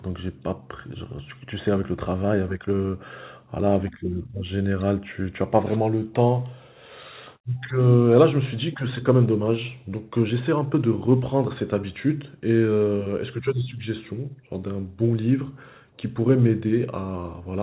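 No technical faults can be heard anywhere in the speech. It arrives over a call path with nothing above 4 kHz, a narrow telephone band that fits G.711 mu-law coding, which leaves its usual coding noise.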